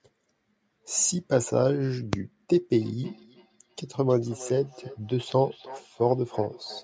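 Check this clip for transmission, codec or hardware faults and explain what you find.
One fault is present. From 2.57 s to the end there is feedback echo between two devices. A second device on the call replays the audio into this microphone, and the echo canceller cannot remove sound it did not play itself. Faint copies about 19 dB down follow roughly every 300 ms and appear as ghost streaks trailing each burst on a spectrogram. The band stopping at 8 kHz comes from the call's microphone processing.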